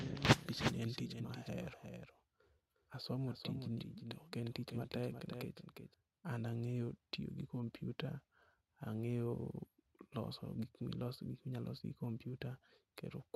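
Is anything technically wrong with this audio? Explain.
Yes, there is a doubled audio track from the very start of the clip until 5.94 s. The same speech signal is likely reaching the mix twice, once directly and once through a slower path, so a second full-band copy trails the original by roughly four tenths of a second at around 5 dB quieter. It sounds like a flat, dry repeat with no reverberant tail, and at 5.94 s it cuts off abruptly.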